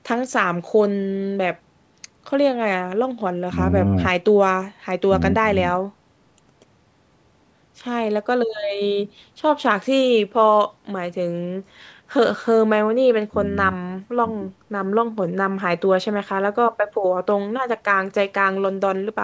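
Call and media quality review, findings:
Nothing to flag here, just the usual call microphone processing at work, with the speech topping out at 8 kHz and the lowest bass trimmed off as that path normally does.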